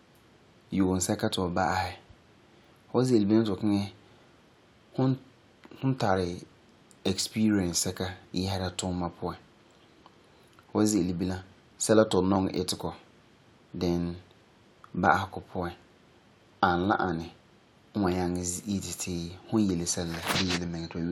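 Dropped samples at 12.36 s and 15.06 s: each is a single sharp click in the speech, likely from well under a millisecond of the stream going missing, so the waveform jumps abruptly to a later value without any sound audibly disappearing.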